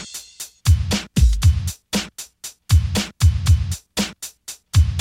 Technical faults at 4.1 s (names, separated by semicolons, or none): none